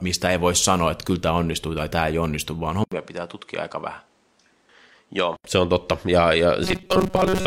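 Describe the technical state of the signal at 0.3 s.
At 0.3 s the speech signal is intact, with no fault audible at that moment.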